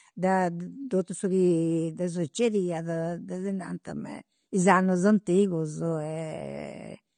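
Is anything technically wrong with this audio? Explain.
Yes. Throughout the speech there is likely AAC compression damage. The audio sounds plainly dull and smeared, as though the codec ran at a low bitrate, around 32 kbps. A spectrogram shows a hard ceiling with nothing above 9.7 kHz.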